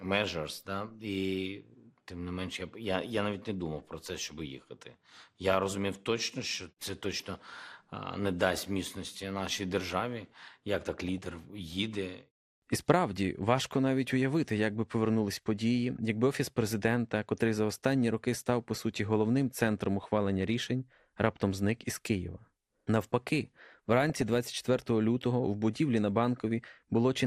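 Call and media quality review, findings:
Dull, band-limited speech with a gurgling, granular edge, present for the whole clip. Likely MP2 compression at a low rate, roughly 80 kbps. Layer II splits the signal into 32 sub-bands and starves the upper ones of bits, so treble switches in and out and the remaining bands are coarsely quantised. Codec damage plainly audible throughout.

Short bursts of noise blips in single sub-bands riding over the speech: DAB burbling.
7.34–7.54 s, right after "розумів точно що це".
11.09–11.40 s, after "нашій державі як так".
20.03–20.07 s, between "по суті головним центром" and "рішень раптом зник із".
24.10–24.22 s.
26.91–27.03 s.
Residual bit errors, at a small fraction of a percent, slip past error correction into the MP2 frames. Corrupted samples put short noise blips in single sub-bands, and corrupted scale factors make sub-bands jump in level for up to a frame.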